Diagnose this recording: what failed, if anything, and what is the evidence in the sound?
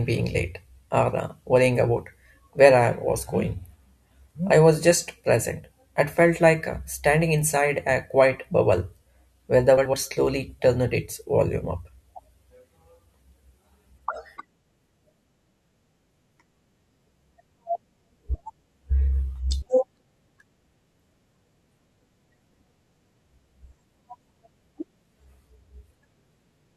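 Frames out of order, at the network stage. Brief garbled flutters occur at 9.77 s, after "quiet bubble where the", and at 14.49, 19.08 and 22.36 s. Two neighbouring 60 to 80 ms runs play swapped. No time is lost.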